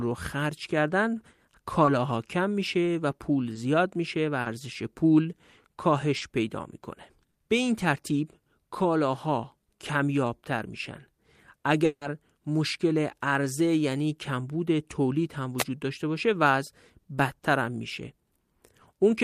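Short concealed packet loss strikes five times in the first half of the speech, at 1.85, 3.53, 4.41, 6.17 and 7.31 s. Each time a few packets failed to reach the decoder, and it bridged the gap by extending the preceding sound before blending back. The first two gaps last 20 ms and the last three 40 ms; each comes across as a brief smear or wobble, and the longer ones can swallow a brief consonant.

From 11.85 to 12.03 s, the speech is replaced for 160 ms by a synthetic continuation of the last sound, a fading carry-over that never reaches silence before the real audio picks up again with that stretch missing. The likely cause is a long network dropout, where nothing arrived for longer than a few packets and the receiver's concealment covered the whole hole.

At 15.58 to 15.64 s, a wireless microphone noise hit appears. The radio link from the FM microphone faded as reflected signals cancelled the direct one, and the receiver's noise rose through the audio. 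It comes across as a quick swish of static lasting about 55 ms.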